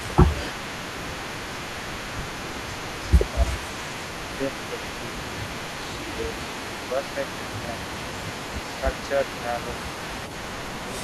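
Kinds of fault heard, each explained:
Overdone noise removal: Noise reduction was set too hard, zeroing bands near its noise estimate and taking quiet speech detail with them. The background drops and breaks up into twinkling specks. A spectrogram shows scattered bright dots on a dark floor and ragged, gappy harmonics.
Echo leak: A delayed copy of the voice trails it by 330 ms, around 10 dB quieter, throughout the clip, likely loudspeaker echo the far end's canceller failed to remove. On a spectrogram each syllable's pattern reappears faintly about a third of a second later.
Speech suppressed in double talk: The voice dips by around 5 dB in short pieces within 1.09 to 3.48 s, 6.13 to 6.35 s and 6.91 to 7.67 s, likely an echo canceller turning down its own talker along with the loudspeaker echo during overlapping talk. The waveform envelope shows shallow notches.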